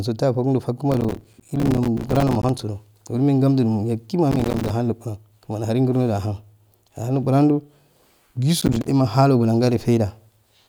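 From 0.92 to 2.62 s, 4.32 to 4.70 s (ending just before "ahun luguran kumani aharun"), and 8.60 to 8.88 s, the speech carries processor overload crackle: deadlines for buffers of around 5 ms are missed some 70, 30 and 20 times over each stretch, each leaving a hard-edged silent hole. Unlike a single dropout or a click, it is a dense, gritty tearing that rides on the speech and then stops cleanly.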